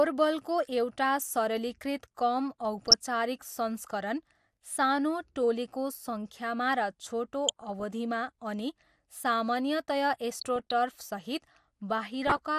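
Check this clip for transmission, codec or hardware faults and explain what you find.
The speech carries two faults: a dull, granular coding sound throughout, and four short bursts of DAB burbling.

Across the whole clip the speech is dull and carries a gurgling, grainy edge, with the top end flickering in and out. The likely cause is MP2 compression at a low rate, around 80 kbps. Layer II divides the spectrum into 32 sub-bands and shares out bits, so starved upper bands switch off and the rest are coarsely quantised. Unlike burbling, this texture is constant rather than arriving in bursts.

DAB burbling occurs at 2.78–2.94 s, 7.48–7.84 s, 10.38–10.71 s and 12.22–12.39 s. Each burst adds short blips of noise in single sub-bands laid over the speech. Bit errors slip past the error correction into the MP2 frames: corrupted samples put short blips of noise in single sub-bands, and corrupted scale factors make sub-bands jump in level for up to a frame. 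The error rate suggested is small, well under one percent. What separates this from the steady compression grain is its sudden onset and clear end.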